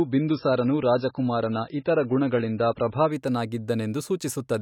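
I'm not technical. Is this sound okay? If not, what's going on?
No. From 0.0 to 3.12 s the speech sounds dull and muffled, with nothing above 5.5 kHz and a smeared, watery texture. This is an adaptive stream starting at a low bitrate: the player began on a low-quality version, then switched to a much better one at 3.12 s, where the sound abruptly becomes clearer without any gap.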